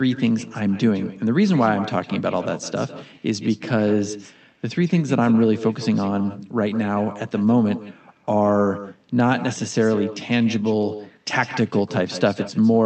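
From start to finish, the speech carries an echo with no canceller. The far end's loudspeaker feeds its microphone, and nothing strips that return. So every phrase comes back roughly 150 ms later, about 13 dB quieter and thinner.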